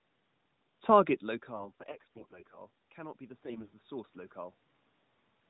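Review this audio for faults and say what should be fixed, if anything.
AMR bit errors, 1.56 to 2.58 s and again 3.44 to 3.70 s: the sound keeps its pitch and level but turns hoarse, scratchy and gargly. Weakly protected bits in the mobile codec frames, consistent with 12.2 kbps AMR narrowband, arrived flipped, around one in ten, while the checksum on the critical bits still passed. That misplaced the excitation pulses and skewed the finer pitch, gain and spectral values. Strengthening the radio link or adding error concealment for frames with suspect low-class bits would prevent this.

Automatic gain rising, 2.97 to 4.19 s: after the input level fell by about 18 dB, the gain control ramped up by about 5 dB over roughly a second, so the voice and the room noise swell together. Setting a steadier input level or a slower, capped gain control would prevent it.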